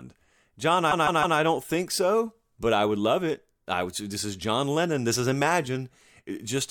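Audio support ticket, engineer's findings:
Repeated frames: a run of encoded frames, roughly six, replayed from the stream. A 157 ms block plays three extra times from 0.90 to 1.37 s, a stutter before "don't think so but". Adds 470 ms.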